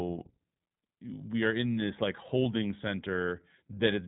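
From start to finish the speech carries plainly audible iLBC codec damage: a narrowband coder rebuilding each short frame on its own, consistent with 20 ms frames at about 15 kbps. It sounds rough and slightly synthetic, and a spectrogram shows everything above 3.9 kHz missing.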